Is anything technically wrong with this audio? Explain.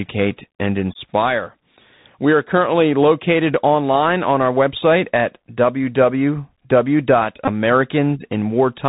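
Yes, two faults. Bluetooth CVSD headset codec, throughout: one-bit delta coding, which fits a 64 kbps link, cuts everything above 4 kHz, making sibilants scratchy and leaving granular hiss under the speech. Bluetooth headset packet repeated, 7.45 to 7.50 s: about 22.5 ms of lost audio, fitting roughly six dropped packets, was filled by re-decoding old data, giving a brief buzz near 267 Hz.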